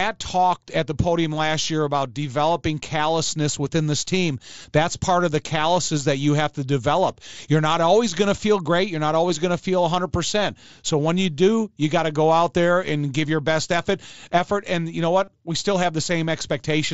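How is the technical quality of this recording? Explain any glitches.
The speech has three short concealed dropouts, heard through the 8 kHz-limited wideband sound of an mSBC Bluetooth headset link. Concealed Bluetooth headset packet loss occurs at 4.62 s, after "callousness within this team", at 9.29 s, before "going to feel", and from 15.25 to 15.28 s, after "and you know". Headset packets went missing, about 15, 7.5 and 30 ms, and the phone filled each gap by repeating the best-matching recent stretch of waveform. The second is nearly hidden. The first and last are brief buzzy tones with a small warble as real audio resumes.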